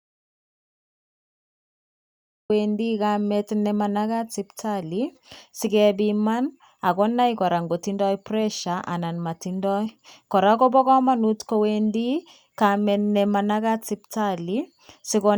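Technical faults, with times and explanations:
0.00–2.50 s, audio dropout to silence: The signal path into the recorder was already broken when the clip begins, likely through a disconnected device, a failed link or a mute left on, while the recorder kept writing silence. The clip therefore opens in silence with no room tone or hiss beneath it. The speech then cuts in abruptly at 2.50 s, mid-flow rather than from a natural start, and whatever came before is lost.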